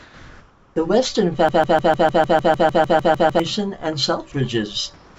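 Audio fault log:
0.00–0.76 s and 4.94–5.19 s, comfort noise in place of the background: The room tone at the start and end is a smooth, even hiss with no texture, about 1 dB louder than the real background in the first span and about 2 dB quieter in the last, where the background sits about 32 and 28 dB below the loudest speech. The likely cause is discontinuous transmission: during pauses the sender stopped sending audio, and the receiver generated noise shaped roughly like the background, without its real detail.
1.49–3.40 s, broken-record loop: A fragment of about 0.15 s repeats exactly, back to back, 13 times in a row, giving a rapid stutter that holds for almost two seconds before normal speech returns. A stalled stream most likely kept replaying the last piece it held in its buffer. The speech that should have filled those two seconds never arrives and is lost from the clip.
4.32 s, sound dropped by the voice detector: For a moment of about 20 ms the speech gives way to the same flat noise, and about 10 ms of actual sound is lost. 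The likely cause is the sender's voice detector judging part of the speech to be background and briefly stopping transmission, so the receiver played synthetic noise until speech was detected again. Throughout, nothing above 8 kHz comes through the call codec.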